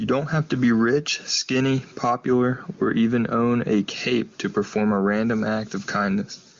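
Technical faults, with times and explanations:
The speech carries no technical faults; it has passed through an AMR wideband (HD Voice) codec at a high rate, which fits 23.85 kbit/s, with the band stopping near 7.2 kHz.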